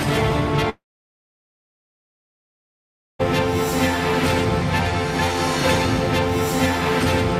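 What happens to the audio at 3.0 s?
At 3.0 s you're near the end of a silent gap running from about 0.69 s to 3.21 s. The sound trails off in a brief fading buzz, then roughly 2.4 s of silence before it resumes with about 2.5 s missing. That's likely a long network dropout.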